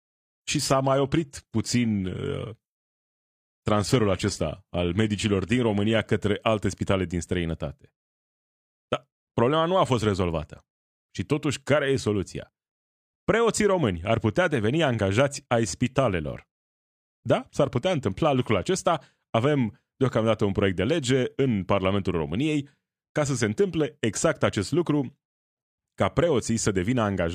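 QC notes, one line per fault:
0.0–6.0 s, adaptive stream starting at a low bitrate: the player opened on a low rung, which sounds like HE-AAC near 24 kbit/s, then stepped up to what fits AAC-LC at 96 kbit/s. The opening treble sounds synthetic and smeared, then clears abruptly without a gap just before "către alte spitale din".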